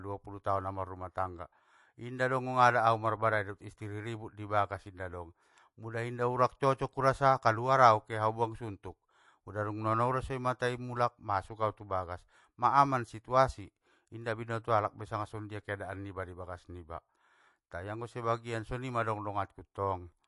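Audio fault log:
Throughout, MP3 compression: swirly, watery speech with a hard spectrogram ceiling at 11.3 kHz and flickering high bins, likely from MP3 near 48 kbps.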